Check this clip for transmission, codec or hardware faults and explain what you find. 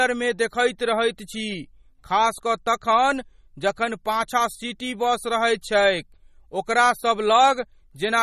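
There is one codec fault, present across the whole clip. MP3 compression, throughout: the speech has nothing above 15 kHz and plainly audible codec damage, likely from MP3 coding at a bitrate so low that it fits roughly 32 kbps. Starved of bits, the encoder drops the treble at a fixed cut-off and zeroes quieter frequency lines that then flicker on and off between frames, giving a watery, swirling texture, chirpy s sounds and smeared consonant attacks.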